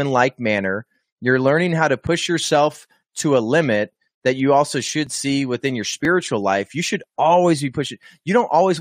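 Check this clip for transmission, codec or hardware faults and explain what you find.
Two faults are present in this speech clip: sample clock jitter throughout, and repeated overlaps between stream segments.

Sample clock jitter runs the whole length. The converter's clock wanders on the order of a couple of microseconds, so each sample is taken a little early or late. Where the waveform changes fastest, that timing error becomes an amplitude error, here roughly 35 dB below the signal. It sounds like a faint hiss or grit riding on louder and brighter passages and disappearing in pauses.

Overlaps between stream segments produce tiny skips at 2.07 s (between "learning how to" and "yourself to a limit"), 5.07 s, 6.05 s, 7.04 s (just before "always be"), and 8.03 s (just after "should always be"). The segments are 1.0 s long, and their timestamps overlap, so the player trims a sliver of genuine audio at each join. 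Roughly 10 to 20 ms go missing and the waveform jumps, which is heard as a tick or small skip that recurs with the segment rhythm.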